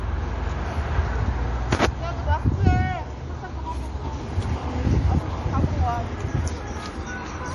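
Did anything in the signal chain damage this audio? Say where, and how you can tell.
Yes. MP3 compression runs through the whole clip, at the codec stage. Nothing sounds above 11.4 kHz, and the audio has a plainly audible watery swirl, likely from an MP3 encoder starving for bits at a rate that fits roughly 48 kbps, cutting the treble and zeroing weak frequency lines.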